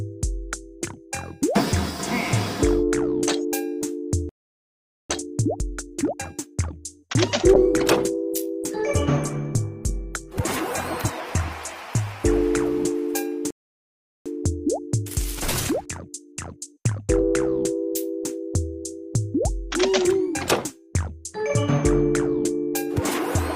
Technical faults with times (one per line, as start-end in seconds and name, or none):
4.29-5.10 playback stall
5.10-6.70 time-compressed catch-up
7.54-12.56 call bitrate drop
13.50-14.26 playback stall
14.26-17.26 time-compressed catch-up